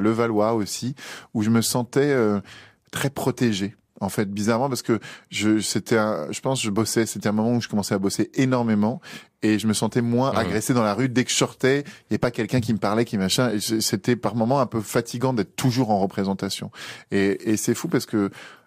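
Nothing stood out on listening to this speech recording.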